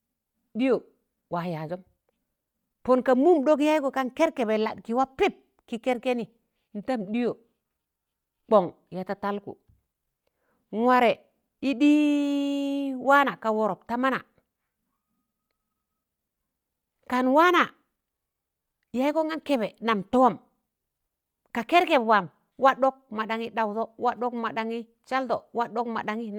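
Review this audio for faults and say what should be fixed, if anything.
Bluetooth LC3 compression affects the speech for the whole clip. Its damage is plainly audible as a grainy, breathy edge on the upper range. The likely cause is an LC3 link coding in 10 ms frames, at a rate that fits about 48 kbps. On a spectrogram, the content above a few kHz looks blotchy and speckled, with energy stopping entirely above 20.2 kHz. The waveform shows nothing obvious. To prevent it, record locally or over a wired path rather than through a Bluetooth LE Audio link.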